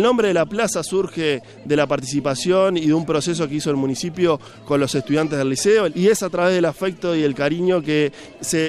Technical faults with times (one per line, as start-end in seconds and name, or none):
none